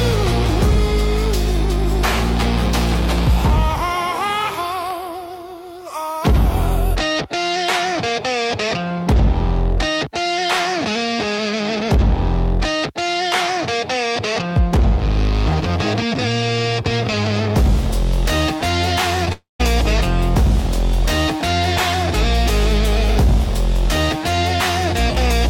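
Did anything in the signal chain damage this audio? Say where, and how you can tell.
Yes. At 19.25 to 19.28 s there is short concealed packet loss in the network stage. About 20 ms of audio never arrived, and the decoder patched the gap by extending the preceding sound before crossfading back. You hear a brief smear or wobble. On a spectrogram the harmonics or noise band run flat and slightly blurred across that sliver. On the waveform the cycles repeat too regularly for a few milliseconds before normal detail resumes.

Just after, from 19.32 to 19.61 s, the sound turns into a fading buzz-like continuation and then drops to roughly 0.16 s of silence. It resumes without the missing stretch, which points to a long network dropout as the likely cause, with about 0.28 s lost in total. A spectrogram shows repeated, decaying partials collapsing into an empty band. The waveform shape is a tapering envelope falling to a flat line, then an abrupt restart.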